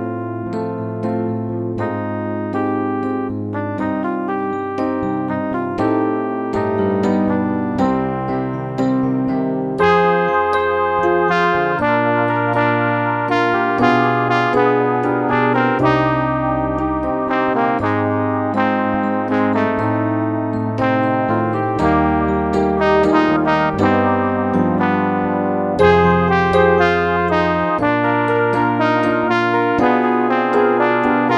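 No technical faults can be heard anywhere in the clip. Nothing breaks up, drops out or changes character along the way.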